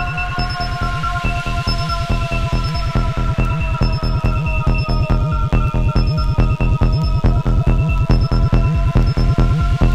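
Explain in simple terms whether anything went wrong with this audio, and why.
A steady, thin buzz runs underneath the audio from start to finish. This is DECT cordless phone buzz: a nearby cordless phone or base station sends a radio burst 100 times a second, and the audio circuitry picks it up and turns it into sound.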